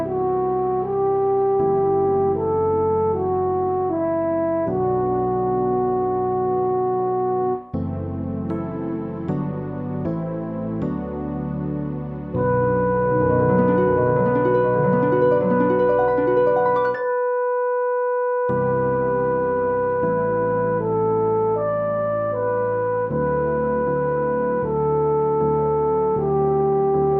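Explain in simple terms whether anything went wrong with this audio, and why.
Nothing went wrong here.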